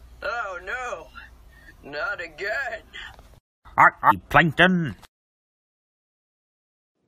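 At about 4.10 to 4.12 s the audio jumps abruptly ahead with a brief blip. This is likely a stream segment skipped: one chunk failed to load and playback resumed from the next.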